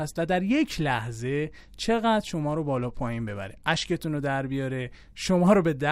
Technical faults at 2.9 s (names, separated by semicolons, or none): Bluetooth SBC bit pool drop